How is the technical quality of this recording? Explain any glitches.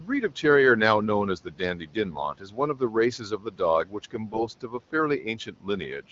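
The recording has two kinds of fault: repeated speech cut by the noise suppressor, and two short bursts of AMR bit errors. The faint room noise sits about 26 dB under the speech.

Speech cut by the noise suppressor occurs at 0.00–0.44, 1.45–2.95, 3.18–3.60, 3.85–4.94 and 5.22–5.68 s. The suppressor mistook stretches of speech for background noise and pulled them down by about 11 to 13 dB, so parts of each span sound swallowed, faint or clipped at word edges.

AMR bit errors occur at 2.10–2.23 s and 4.30–4.45 s. Corrupted bits in a handful of wideband AMR frames got past the checksum, so the decoder rebuilt those frames from wrong excitation pulses and slightly wrong gain and spectral values. Pitch and level hold roughly steady, but the speech briefly turns hoarse, scratchy and gargly.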